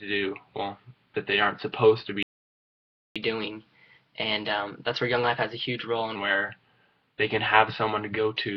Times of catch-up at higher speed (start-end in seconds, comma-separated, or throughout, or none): 3.16-6.16